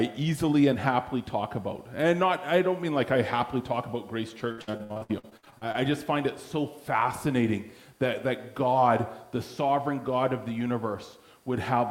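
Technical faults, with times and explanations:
4.51–5.76 s: repeated packet loss (robotic sound). Rapid successive dropouts, longest 62 ms, are patched by extending preceding audio, so 43% of the span is concealed and sounds choppy with pieces missing.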